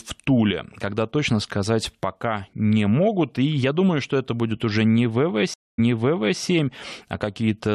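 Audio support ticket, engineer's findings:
Stream reconnect, 5.54 to 6.41 s, after "это будет уже не". Dropout about 0.24 s. Playback resumes 0.63 s earlier, repeating audio. Probable component: network input and decoder. Connection lost, fresh decoder started mid-stream, server resent a backlog burst.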